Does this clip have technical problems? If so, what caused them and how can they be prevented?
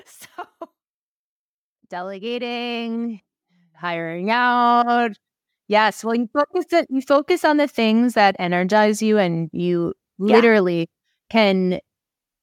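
Yes, there is automatic gain rising. The automatic gain control judged the input too quiet and raised its gain by about 13 dB between 1.89 and 5.14 s, so the speech and background swell together across those three seconds. Setting input gain manually with automatic gain control disabled prevents it.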